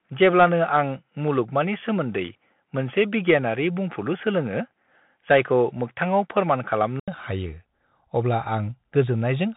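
From the first moment to the last, the speech carries the signature of a Bluetooth CVSD headset codec, and the damage is plainly audible. CVSD encodes each sample as a single up-or-down step whose size adapts, a scheme consistent with a 64 kbps stream. Nothing survives above 3.8 kHz. Sibilants come out scratchy, fast loud rises overshoot the step and distort, and a fine granular hiss sits beneath the voice. A spectrogram would show a hard ceiling near 3.8 kHz across the whole clip.

Stacked on top of that, from 0.0 s to 7.08 s the sound is narrower still, topping out around 3.4 kHz, so it reads as boxy and dull. Then an 80 ms gap of silence opens and the band widens back to the codec's 3.8 kHz limit. The likely cause is an input switched to a poorer device and then back. Its added background noise is very faint, and there is no obvious jump in loudness. On a spectrogram the top edge steps up at about 7.1 s, and the waveform shows a brief flat gap at that point.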